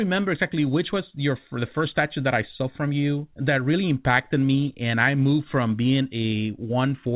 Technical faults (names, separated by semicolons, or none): clock drift between sender and receiver; repeated timing corrections